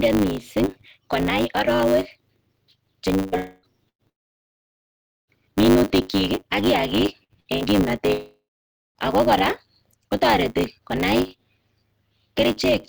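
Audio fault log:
Throughout: block size mismatch (truncated). One stage writes blocks that fit 512 samples, and the next stage reads fewer, so the tail of every block is discarded. The regular cuts, 100 times a second, produce a steady 100 Hz buzz under the speech. Dropping part of every block also makes the speech run about 1.16 times faster while its timbre stays.
3.16–3.35 s, 3.37–3.66 s, 4.09–5.30 s and 8.13–8.98 s: long network dropout. The likely cause is that audio stopped arriving for a stretch and the receiver filled the gap with a fading continuation of the last sound. In the first two gaps that buzz or hiss lasts the whole 0.18 s and 0.3 s. At 4.09 s it gives way to about 1.4 s of silence, and at 8.13 s to about 0.6 s. Each time the speech resumes further on, with the missing part gone.
3.89–4.02 s and 7.24–7.32 s, 7.40–7.48 s, 7.56–7.64 s: burst of packet loss. A short run of packets was lost or arrived too late, about 120 ms at 3.89 s and about 60 ms in each of the three closely spaced bursts near 7.3 to 7.6 s. 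The receiver held the last sound as a brief buzz or hiss and turned it down. At 3.89 s it falls to near silence for about 90 ms. The speech then jumps ahead past what was lost.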